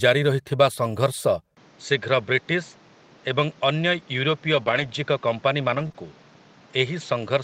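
A speech clip where things change at 1.55 s. There's a short dropout of about 20 ms, and from then to the end the sound goes duller and boxier, with nothing above 7.6 kHz and a new layer of background noise sitting roughly 30 dB under the talker. The loudness stays about the same. That's most likely an input switched to a poorer device, such as a second mic or a headset dropping into its call profile, and the narrower band and different noise floor come from that hardware. Then, between 4.63 s and 5.96 s, you get scattered short gaps: about three small holes, none much longer than 30 ms, adding up to 60 ms of missing audio. The receiver papered over them by stretching the preceding sound, reworking about 160 ms in total, so you hear brief ticks and little smeared hiccups in an otherwise continuous stretch.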